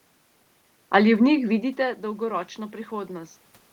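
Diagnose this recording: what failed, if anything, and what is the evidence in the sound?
Automatic gain rising, in the call-processing stage: from 1.33 to 3.41 s the level recovers after the input drops by about 14 dB around 1.5 s as the talker moves back. The AGC ramps its gain up by about 4 dB, lifting voice and room noise together. On a waveform the envelope swells gradually, and on a spectrogram the noise floor brightens alongside the speech.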